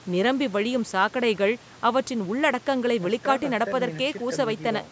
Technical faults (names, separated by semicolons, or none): none